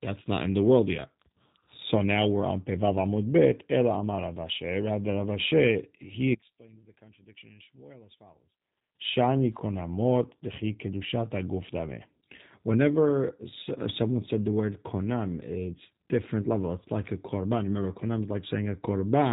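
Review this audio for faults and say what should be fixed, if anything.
The whole recording carries G.729 codec damage. Nothing passes above 3.8 kHz. Speech sounds rough and synthetic, rebuilt from a filter and sparse pulses, consistent with 8 kbit/s. Capture or archive through a wideband codec instead.

From 6.34 to 8.95 s the level drops by about 26 dB and the speech nearly disappears. The likely cause is one channel inverted, so the shared centre cancels in mono. Check channel polarity before summing to mono.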